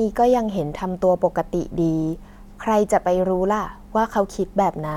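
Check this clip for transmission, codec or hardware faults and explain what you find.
Nothing in this speech recording points to a transmission, codec or hardware problem, and the signal holds steady and intact throughout.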